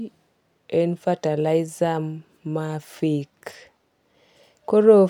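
No technical faults are audible.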